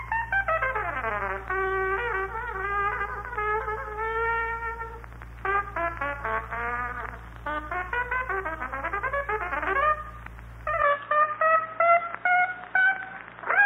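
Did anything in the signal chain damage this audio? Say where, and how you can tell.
Yes. At 10.82 s the input likely switched to a poorer device: everything above 3.8 kHz vanishes without a gap, and the level shifts by about 5 dB.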